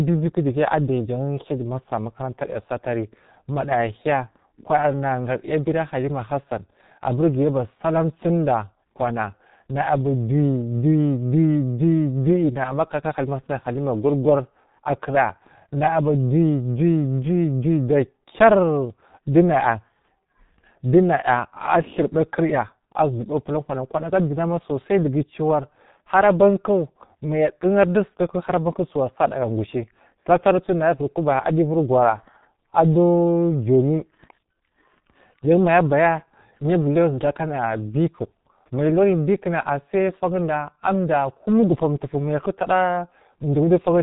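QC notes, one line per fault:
throughout, G.723.1 codec: the speech is muffled and hoarse, with consonants smeared together, which fits a low-rate telephony coder running near 6.3 kbit/s. The encoder discards everything above 3.8 kHz and rebuilds the signal from a coarse voice model refreshed only every 30 ms, so the damage is heavy. On a spectrogram, energy stops at a hard ceiling at 3.8 kHz, harmonics look blocky and blurred in time, and fricatives lack their high-frequency streaks.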